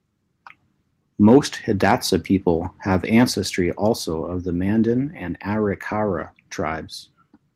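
From 1.28 to 1.38 s the loudest part of the speech turns harsh and crackly, its peaks flattened. This is microphone overload: the input was likely set too high, driving the signal about 2 dB past the converter's limit and clipping roughly one sample in twenty.

At 3.24 s, just before "also of the", the voice and background drop together in a single sudden step of about 3 dB. This is the microphone volume stepped down, likely the call software reducing the device's input gain in one move.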